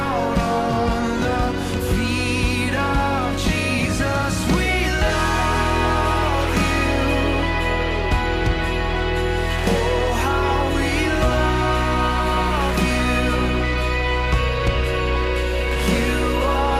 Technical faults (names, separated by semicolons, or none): none